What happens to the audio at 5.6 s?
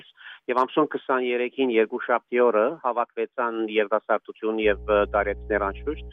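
At 5.6 s there is mains hum, a steady 60 Hz tone from about 4.62 s to the end, roughly 15 dB under the signal. A ground loop or nearby transformer couples the power line in. Its fixed pitch and constant level set it apart from rumble or low-frequency noise.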